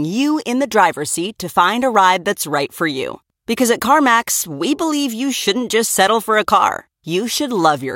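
No technical faults are audible anywhere in the recording.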